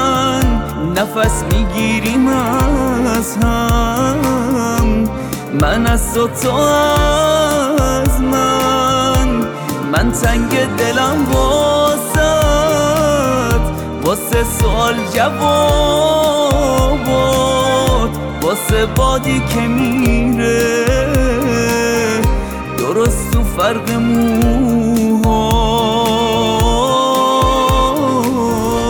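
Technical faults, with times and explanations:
No technical faults detected.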